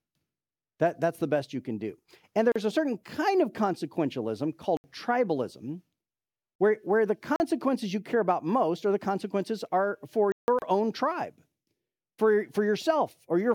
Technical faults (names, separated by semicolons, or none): gap at a join of encoded pieces; block of digital silence